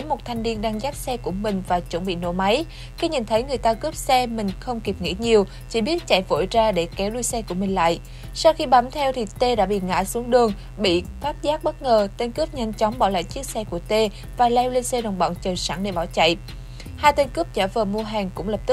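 A steady mains buzz runs through the whole clip. It is a raspy tone built on 60 Hz harmonics, reaching up into several kHz, sitting roughly 25 dB below the sound. Sharp switching spikes, twice per mains cycle, leak in through a dimmer, rectifier or unshielded cable.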